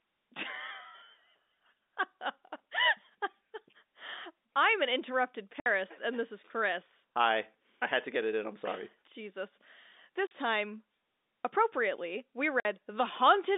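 Speech carried over a G.711 telephone line and broken by packet loss filled with silence: hard-edged gaps of 60 ms at 5.6 s after "I'm an interrupted", 40 ms at 10.27 s and 50 ms at 12.6 s after "appropriately we". They show as flat blanks in the waveform and empty vertical stripes on the spectrogram.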